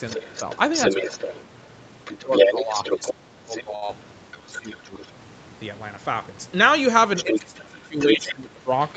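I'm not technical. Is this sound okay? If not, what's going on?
No. The echo canceller likely failed to remove the other person's voice coming from the talker's loudspeaker, so this is other side's voice leaking through. A second voice can be heard from 0.08 to 5.10 seconds and again from 7.16 to 8.28 seconds, nearly as loud as the talker.

Because both sides were likely talking at once, there is speech suppressed in double talk. The talker's voice dips or breaks up from 0.16 to 1.08 seconds, from 2.17 to 5.01 seconds and from 7.24 seconds to the end (these last two most strongly).

A short stall from a late packet occurs at 3.75 seconds. A piece of the call arrived late, so the receiver stretched the last sound for about 0.07 seconds, holding it slightly too long.

A short concealed packet loss follows at 3.86 seconds. About 0.06 seconds of audio never arrived, and the receiver covered the gap with a brief smear.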